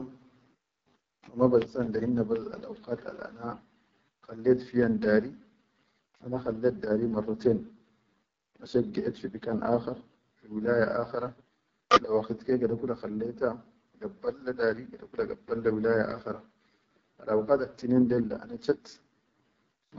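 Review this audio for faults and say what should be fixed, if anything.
AMR wideband (HD Voice) codec damage runs through the whole clip. The speech sounds rough and raspy, and the damage is plainly audible. Nothing is present above 7.6 kHz. The codec models speech below 6.4 kHz with a pulse-excited vocal tract filter and fills the top band with shaped noise. Its lowest modes lack the bits to code that excitation cleanly, and the raspiness fits the 8.85 kbit/s mode. To prevent it, send the call at 12.65 kbit/s or higher.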